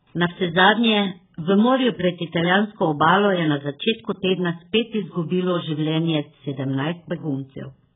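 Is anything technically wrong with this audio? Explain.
Yes. AAC compression runs through the whole speech clip. Nothing survives above 3.7 kHz, which likely points to AAC-LC at a starved bitrate, around 8 kbps, where the encoder drops the top band and coarsely quantises the rest. The result is heavily dull and smeared, with a warbling, fizzy texture on sibilants.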